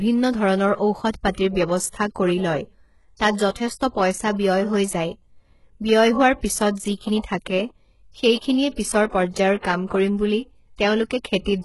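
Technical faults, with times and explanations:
Throughout, HE-AAC compression: the encoder likely coded only the lower spectrum and rebuilt the treble by copying lower bands upward. The result is heavy damage consistent with about 12 kbps. Nothing remains above 11.5 kHz, and sibilants sound gritty and metallic because the rebuilt harmonics are misaligned.
3.50–3.55 s, 7.22 s and 9.86–9.90 s (just before "কৰিম বুলি"), pre-echo: block quantisation noise, sized for a sharp attack late in the block, spills into the quiet moment before it. This leaves a hiss of 51 ms, 18 ms and 46 ms, and the attacks sound softened and smeared.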